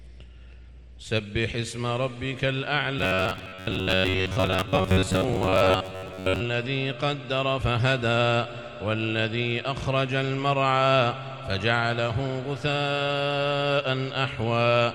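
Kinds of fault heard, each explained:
Robotic sound from repeated short buffers: from 2.99 to 6.40 s the sound collapses into a rigid, metallic buzz near 94 Hz that still loosely tracks the original contour. The likely cause is audio arriving too slowly, so playback fills the gaps by looping a fragment of roughly 11 ms, whose repetition rate sets that fixed pitch. For most of this stretch, repeats stand in for real audio, and the material they replace is skipped.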